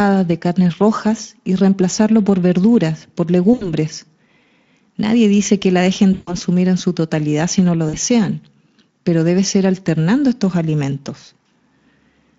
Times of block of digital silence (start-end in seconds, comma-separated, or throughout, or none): 6.83